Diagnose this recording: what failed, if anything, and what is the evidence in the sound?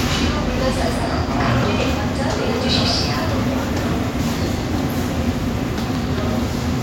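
A loud pop fault sits at the analogue wiring stage. Two sharp pops land between 5.95 and 6.21 s, peaking roughly 10 dB above the sound, which continues underneath. A voltage step, likely from a plug or switch contact, was added to the signal and shaped by later circuits.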